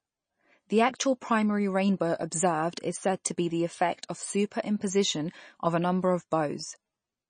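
Speech, and the whole thing carries plainly audible MP3 compression damage, likely from a heavily squeezed encode. Nothing survives above about 9.4 kHz, and the sibilants go watery and chirpy as weak detail flickers between frames, which fits a low bitrate around 32 kbps.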